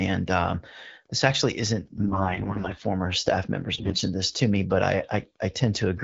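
AMR bit errors from 1.84 to 2.82 s and again from 3.75 to 4.02 s roughen this speech clip. The wideband coding, which sounds like the 12.65 kbit/s mode, is clear outside those spans. Corrupted bits in each frame misplace the excitation pulses and skew the finer pitch, gain and spectral values while pitch and level roughly hold, so the voice turns hoarse and gargly. The damage is lighter in the first span, at about 7% bit errors, and much heavier in the shorter second burst, at about 20%.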